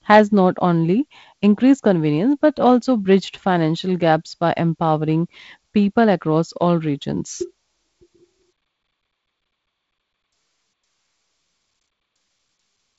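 Speech carried over G.722 wideband telephone coding at 48 kbit/s, band-limited to about 7.7 kHz, with no faults present.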